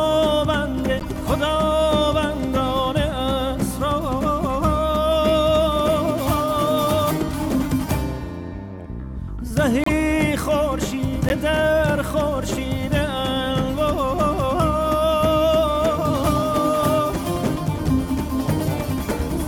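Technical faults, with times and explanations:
0.99–1.04 s, 7.64 s, 9.84–9.89 s and 11.29–11.32 s: corrupt frame decoded. Each is a short chirp or noise burst where the decoder played a damaged compressed frame, misplacing energy in frequency for one to three frames. The errors peak around −25 to −10 dBFS.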